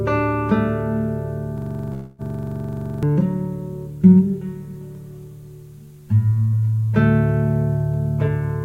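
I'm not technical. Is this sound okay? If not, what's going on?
No. From 1.58 to 3.03 s the music turns into a rapid, machine-gun stutter: a system hang loop, where the computer froze and the sound hardware kept replaying one tiny slice about 23 times a second, losing roughly a second of music.

Within that stretch, from 1.93 to 2.22 s, there's also a call audio freeze: the sound is stretched into a fading buzz or hiss for about a quarter second before continuing. The likely cause is network data arriving late.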